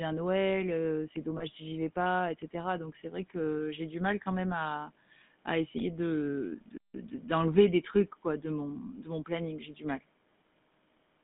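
From start to finish the speech carries the GSM full-rate codec's buzzy, gravelly roughness, and the band runs only from about 150 Hz to 3.6 kHz. This fits 13 kbps GSM coding. Its steady grain throughout sets it apart from band-limiting alone, which dulls without roughening.

At 1.38 to 1.44 s, just before "si j'y vais pas", lost GSM frames leave a brief rough, metallic ring as the last good settings are repeated. This fits one 20 ms frame going missing. Unlike a dropout, the sound is held rather than silenced.

At 6.78 to 6.94 s, between "à à essayer de" and "de d'enlever des trucs", a playback stall cuts the sound to clean silence for about 164 ms, likely because the player ran short of data. The speech then resumes without the ringing tail of concealed frames.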